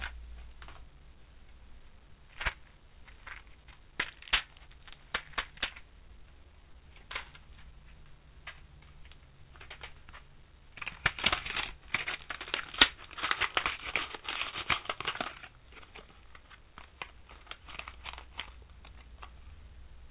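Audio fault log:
No faults detected.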